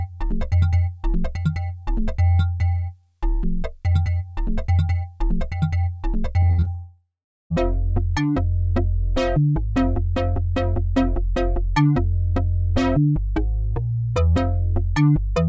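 From 6.40 to 6.68 s, repeated packet loss (robotic sound): five short holes, the longest about 61 ms, are patched by extending prior audio, giving choppy sound with pieces missing. From 6.75 to 7.52 s, a long network dropout is the likely cause: the last sound is stretched into a fading buzz, then about 0.4 s of silence before audio resumes.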